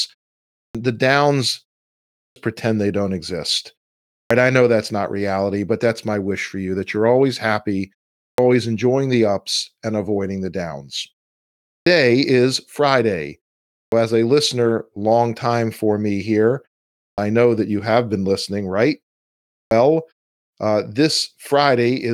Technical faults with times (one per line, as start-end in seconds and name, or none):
0.56-0.75 clipped start after a pause
2.18-2.36 clipped start after a pause
4.14-4.30 clipped start after a pause
8.22-8.38 clipped start after a pause
11.69-11.86 clipped start after a pause
13.73-13.92 clipped start after a pause
17.01-17.18 clipped start after a pause
19.55-19.71 clipped start after a pause